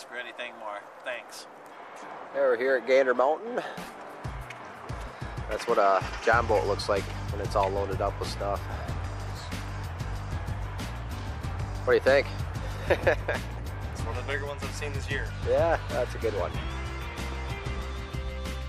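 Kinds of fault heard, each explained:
No technical faults can be heard in this recording. Nothing in it points to a problem in the recording or playback chain.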